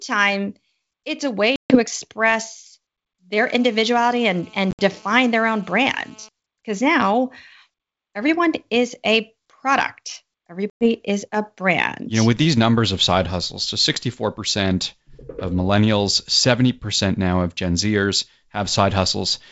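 Right after "it's a", at 1.56 s, there's packet loss on an ADPCM call: about 140 ms drops to hard-edged silence, and the decoder's predictor and step size lose track of the sender's, so the speech comes back with a bit of distortion before settling.

From 3.38 to 6.29 s a GSM phone buzz sits underneath, a steady raspy 217 Hz drone full of harmonics at about 27 dB below the speech. That's a nearby phone on a call whose bursts get rectified in the audio circuit.

Inside that stretch, at 4.71 s, more packets drop: about 70 ms scattered over 80 ms, the longest gap 60 ms, with the same slightly distorted recovery. Then between "everyone is a product" and "is a brand", at 10.70 s, about 110 ms goes missing with the same disturbed return. The G.722 wideband path at 64 kbit/s carries it all, with at most faint coding traces.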